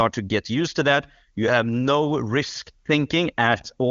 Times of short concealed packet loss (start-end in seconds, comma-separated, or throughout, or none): none